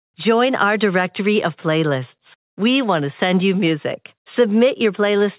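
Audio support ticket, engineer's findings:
No audio faults found.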